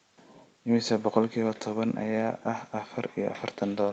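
No technical faults occur in this speech clip, which goes through ordinary call microphone processing and a WebRTC call path whose content stops at 8 kHz.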